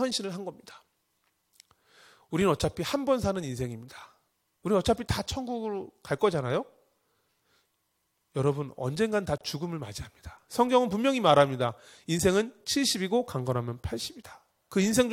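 At 9.38 s the speech was evidently encoded as separate pieces and joined without trimming. The encoder's start-up delay and the padding on the previous piece's last frame both stayed in. The result is a gap at a join of encoded pieces: a gap of about 29 ms, running to 9.41 s, opens mid-flow with its edges smeared by the codec. The speech then resumes exactly where it broke off, so it sounds like a brief dropout rather than a pause.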